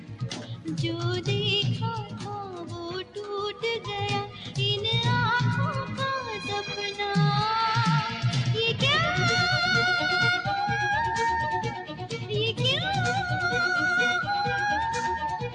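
A noise suppressor built for speech has been left running on this audio, treating steady tones, ambience and decaying tails as noise. Held sounds sink while sharp onsets pass, so the level keeps swinging by around 5 dB, giving a pumping, thinned character. A compressor's pumping follows loudness, and a gate shuts only at low levels. This swing follows how steady the sound is, even when it is loud.

The suppressor also cuts particular passages harder. From 0.0 to 0.69 s the sound drops by about 11 dB, from 1.99 to 2.81 s by about 8 dB, from 4.26 to 4.57 s by about 7 dB, and from 11.7 to 12.32 s by about 10 dB. Each is turned down more than the rest. These are not dropouts, which would leave true silence or clicks. Here the sound stays present but is ducked, and transients within it still come through.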